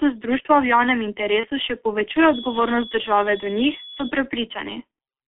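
The G.723.1 codec runs throughout at a low rate that fits roughly 6 kbit/s, confining the speech to about 250 Hz–3.5 kHz, so it sounds heavily muffled and hoarse with smeared consonants. At 1.40–1.48 s, just after "društva v javnem", VoIP packet loss concealed by the speech codec fills a 30 ms gap by extrapolating the last pitch and filter, producing a brief fading smear. The same happens at 4.91–4.97 s, where a 60 ms gap, which fits two lost frames, is bridged and the sound briefly stays weakened.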